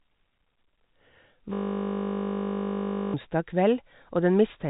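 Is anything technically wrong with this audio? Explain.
Yes. From 1.53 s to 3.14 s the speech gives way to a steady buzz at 50 Hz. It comes from a system hang loop: the computer or audio driver stalled, while the sound hardware kept replaying the last 20 ms of its ring buffer, some 80 times over. Because the looped slice is so short, it fuses into a flat tone rather than a stutter. It is set against the narrow telephone band of the G.711 coding, which passes nothing above 3.8 kHz.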